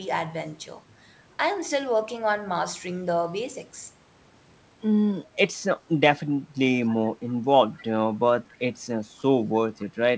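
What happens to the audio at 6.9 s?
Echo leak at 6.87–6.95 s: a faint scrap of the speech returns 270 ms late, likely because a loudspeaker end's echo canceller missed it.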